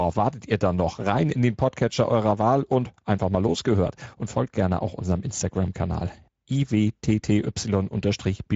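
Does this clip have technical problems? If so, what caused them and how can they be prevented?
Yes. Speex codec compression throughout leaves the excitation short of bits, which fits a bitrate near 16.8 kbps, so speech sounds plainly rough and noisy, with nothing above 7.7 kHz. Prevent it by using a modern codec such as Opus, or a higher Speex quality setting.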